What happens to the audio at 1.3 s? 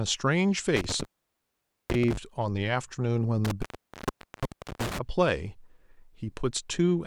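At 1.3 s the speech is inside an intermittent contact fault running from about 0.76 s to 2.17 s. A loose cable or plug connection breaks momentarily, so the signal drops out, with the line open for roughly 0.85 s in total within that span. The cut-outs have crackle at their edges as the contact makes and breaks, and faint hiss remains while the connection is open.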